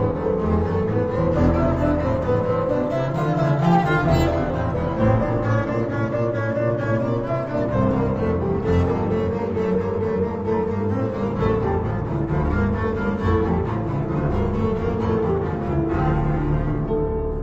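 From start to finish the clip suffers from stereo read as mono: interleaved left and right samples are played as one channel, so everything runs at half speed and an octave low. A spectrogram shows content compressed downward, plus a fainter mirrored copy in the upper half.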